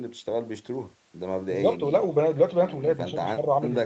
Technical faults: echo with no canceller

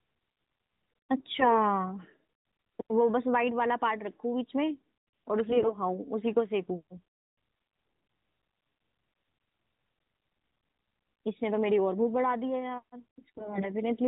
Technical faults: AMR bit errors

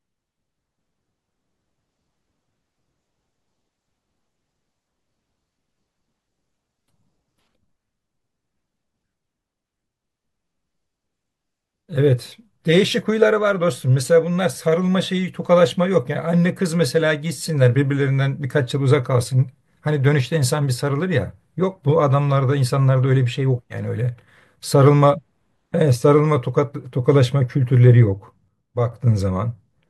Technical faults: sudden gain jump

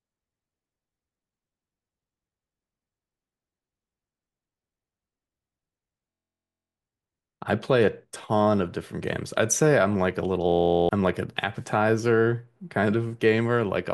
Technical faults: system hang loop

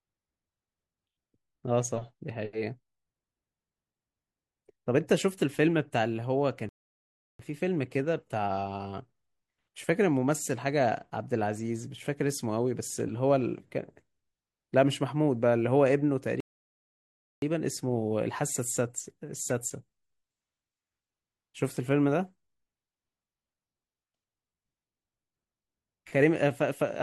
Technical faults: rebuffering stall

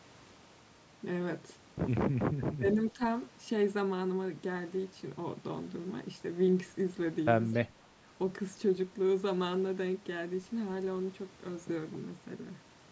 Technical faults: clock slip clicks; speech suppressed in double talk

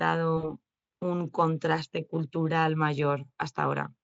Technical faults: VoIP packet loss concealed by the speech codec

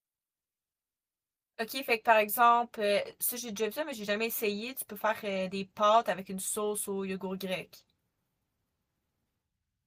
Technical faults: none

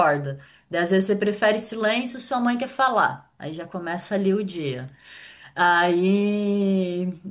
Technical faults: none

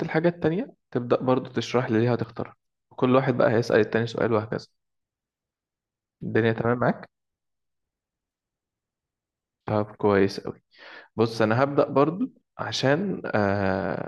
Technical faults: one channel drops out

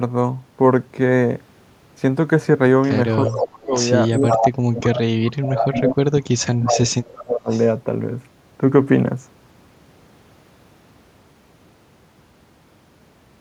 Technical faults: speech suppressed in double talk; echo leak

